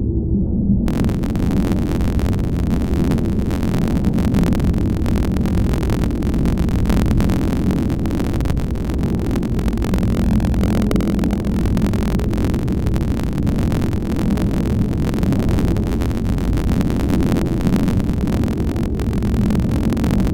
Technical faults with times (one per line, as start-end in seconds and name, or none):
0.86-20.34 buffer tearing